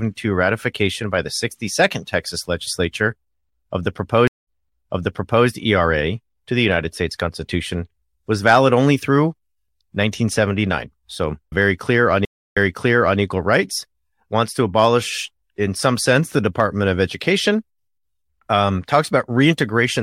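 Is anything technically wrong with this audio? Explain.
Yes. A stream reconnect at 4.27 s after "legislature of the" and at 12.25 s after "very clear on": the connection dropped, and a fresh decoder restarted mid-stream from resent data. Each brings about 0.2 s and 0.3 s of silence, then audio replaying roughly 1.0 s and 0.65 s earlier, resuming at "equal rights wants to" the second time.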